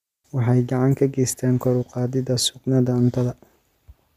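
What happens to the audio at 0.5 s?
Nothing goes wrong at 0.5 s; the speech carries on intact through that moment, with no dropout, click or distortion.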